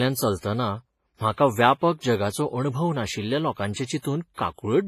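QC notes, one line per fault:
Throughout, WMA compression: the speech rings and sounds washy, with a hiss that swells and fades with the level and nothing above 15.4 kHz. This is likely a transform codec at a low bitrate near 24 kbps, smearing quantisation noise across long blocks and zeroing weak detail.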